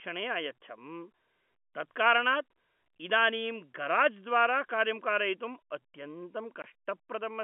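A short hard-edged dropout cuts through the speech from 6.62 to 6.64 s, a 20 ms hole of dead silence. This is packet loss filled with silence: the gap length points to a single lost packet, and the receiver played silence instead of concealing it, so the waveform stops and restarts abruptly. The line itself carries G.711 telephone coding, heard as a narrow telephone band.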